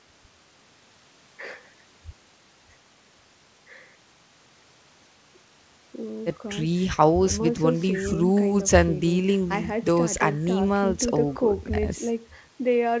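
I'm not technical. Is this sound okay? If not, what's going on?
Yes, nothing wrong can be heard in this recording.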